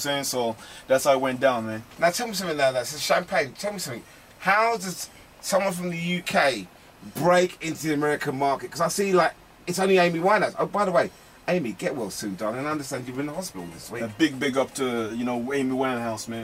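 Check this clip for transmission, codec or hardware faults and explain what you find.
Nothing stood out on listening to this clip.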